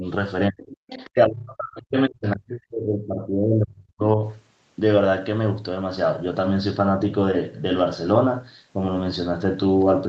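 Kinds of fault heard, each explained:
Speech suppressed in double talk: From 0.5 to 4.18 s the talker's level sinks in pieces, by roughly 40 dB at its deepest, with a brief 10 dB dip at the very start, likely an echo canceller ducking both sides during overlapping talk. The waveform envelope collapses in patches, and spectrogram energy thins.
Other side's voice leaking through: Between 0.87 and 1.1 s a faint second voice sits about 20 dB below the talker, likely loudspeaker echo the canceller failed to remove. On a spectrogram it shows as weak, separate harmonic stripes beneath the main voice, while the waveform barely changes.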